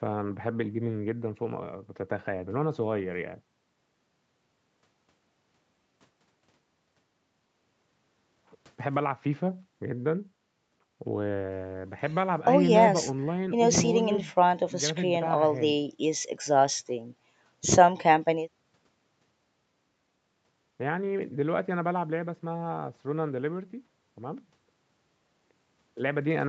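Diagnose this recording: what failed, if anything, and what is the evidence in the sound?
Nothing failed here: the speech has just been through a call's microphone processing, which trims away the deepest bass and leaves nothing above 8 kHz, and that's simply what a call path sounds like.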